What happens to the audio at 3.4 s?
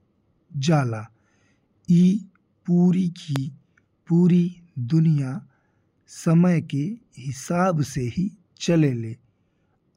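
At 3.36 to 3.38 s there's a single loud pop, a sharp click well above the speech, something like 15 dB hotter. It's likely a voltage spike from a plug, switch or static getting into the chain, and the speech carries on underneath it.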